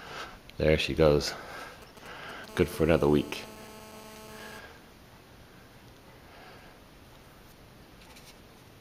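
From 1.82 to 2.46 s the audio carries GSM signalling bursts: a galloping run of ticks and brief 217 Hz buzzes, roughly 20 dB below the programme. A nearby 2G handset exchanging short control bursts with its network has had its radio pulses rectified by the audio circuitry. At 2.49 s this turns into a continuous GSM phone buzz lasting until 4.59 s. The phone is now transmitting steadily at 217 bursts per second, as during a call, and rectification produces a hard, raspy 217 Hz buzz with dense harmonics about 20 dB below the signal, unrelated to the sound being recorded.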